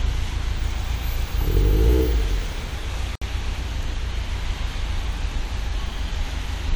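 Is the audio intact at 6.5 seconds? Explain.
Yes, the audio is intact at 6.5 seconds, with no dropout, click, distortion or other fault at that moment.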